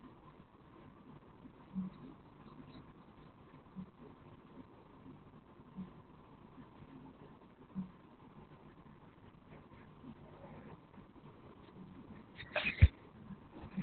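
Speech, muffled and hoarse throughout with nothing above 4.4 kHz: heavy narrowband Opus voice compression, SILK-coded, which fits a bitrate near 8 kbps.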